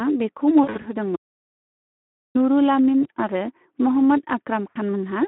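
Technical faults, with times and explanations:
Throughout, Speex codec: hoarse, noisy speech confined to a telephone band of about 200 Hz to 3.4 kHz, as low-rate CELP coding at about 11 kbps starves the excitation.
0.63 to 0.88 s, VoIP packet loss concealed by the speech codec: speech smears into a buzzy tone or coloured noise that fades as the decoder extrapolates over lost frames scattered across 200 ms.
1.16 to 2.35 s, audio dropout to silence: sound cuts to dead silence with no room tone for about 1.2 s, likely from the input being lost while silence was written.
3.03 s, VoIP packet loss concealed by the speech codec: a brief smear where one 20 ms frame was lost and the decoder filled it by repeating its last pitch.
4.70 to 4.78 s, VoIP packet loss concealed by the speech codec: a short, weakening stretch as the decoder extrapolates across 60 ms of lost frames.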